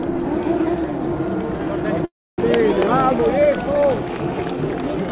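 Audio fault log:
2.05–2.39 s, call audio freeze: the sound gives way to a brief fading buzz, then roughly 270 ms of near silence, a 0.33 s pause in all. It resumes exactly where it stopped, so nothing is lost, but everything after arrives 328 ms late. This is likely a jitter buffer running empty while packets were held up. A waveform shows a decaying tail then a flat stretch; a spectrogram shows a smeared, fading band under the call's 4 kHz ceiling, then a blank gap.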